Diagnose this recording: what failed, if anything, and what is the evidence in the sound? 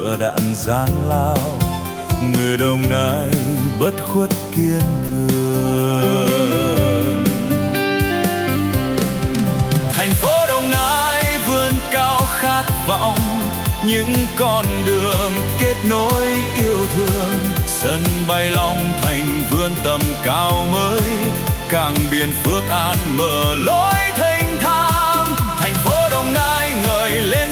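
At 5.07 s the sound drops out for about 20 ms, and a brief patch of steady background noise takes its place before the sound resumes. The stage is the codec. The likely cause is sound dropped by the voice detector, which fits Opus discontinuous transmission cutting off sound it judged to be background.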